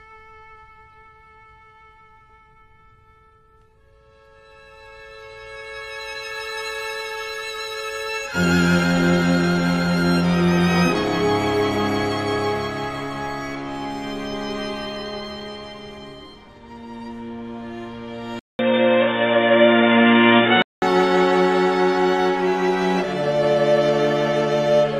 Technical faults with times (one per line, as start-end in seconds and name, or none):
18.39-20.82 input switched to a poorer device